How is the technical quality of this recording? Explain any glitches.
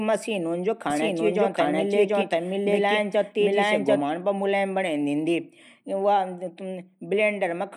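The recording has one clear glitch: a doubled audio track running from 0.9 s to 4.02 s, ending just before "पर व मुलायम". Throughout that stretch a second full-band copy of the speech runs about 0.7 s behind, at roughly the same loudness, so every phrase overlaps itself. The likely cause is the audio being captured twice through a slower path, or an edit leaving two misaligned copies. Unlike an echo or room reverb, the copy doesn't decay or take on room colour, and it starts and stops abruptly.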